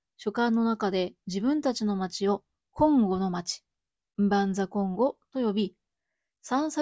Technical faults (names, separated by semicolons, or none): none